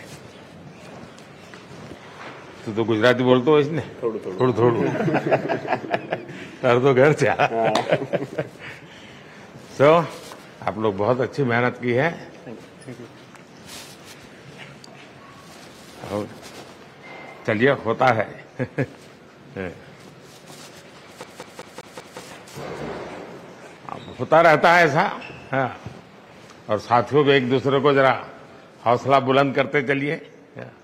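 A CD stuck on one turn hits from 21.24 to 22.20 s: a scratch keeps throwing the laser back, repeating a 192 ms slice five times with brief mutes.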